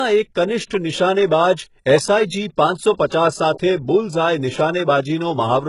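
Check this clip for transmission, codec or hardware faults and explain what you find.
One codec fault runs through the whole clip, and it is most likely HE-AAC compression. The sibilants have a gritty, metallic, lisping edge, and the damage is heavy, which fits a very low bitrate near 12 kbps. The treble is likely rebuilt by spectral band replication from copied lower bands, so its harmonics do not line up with the speech below. A plain low-pass filter would leave the top dull instead of false-bright.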